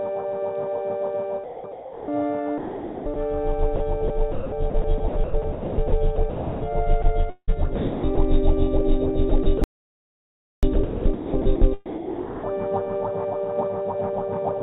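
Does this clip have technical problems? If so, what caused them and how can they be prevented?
Yes. Sound chopped by the voice detector at 1.44–2.08, 2.58–3.16, 4.08–6.62, 7.02–7.50, 7.76–8.18 and 9.30–12.53 s: quiet stretches flicker into synthetic comfort noise and back, likely from an over-eager sender VAD. Unlike a single drop, the switching repeats within each stretch. Lowering the VAD aggressiveness or disabling discontinuous transmission prevents it.

Sound dropped by the voice detector at 3.76–3.80 s: a 40 ms piece is replaced by one steady patch of comfort noise, likely because the detector judged it background. It is one clean swap, not flickering. A longer VAD hangover time prevents it.

Audio dropout to silence at 9.64–10.63 s: about 1 s of silence with no room tone, unlike the noise-filled VAD gaps, likely from a lost input or link. Monitoring the capture device and connection prevents it.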